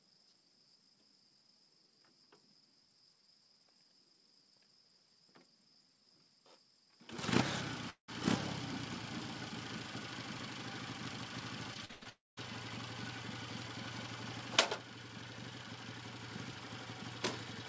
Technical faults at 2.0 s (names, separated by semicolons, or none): none